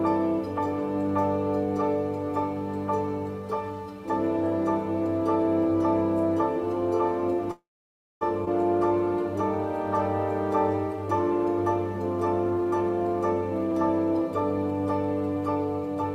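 From 7.51 to 8.23 s the sound stalls into a brief fading buzz, then about 0.6 s of silence before resuming intact. This is a call audio freeze, likely from delayed packets emptying the jitter buffer. At 8.45–8.49 s playback lurches forward with almost no gap. Roughly half a second of audio is gone in this skip ahead, dropped to catch up on the delay. From 12.44 to 13.15 s the sound hurries at about 115% speed with unchanged pitch. This jitter buffer speed-up trimmed around a tenth of a second in small pitch-period cuts.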